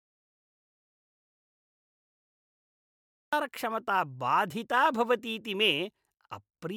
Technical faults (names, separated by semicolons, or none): audio dropout to silence